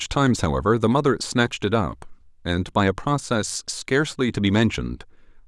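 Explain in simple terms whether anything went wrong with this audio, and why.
Nothing went wrong here; the speech sounds as expected.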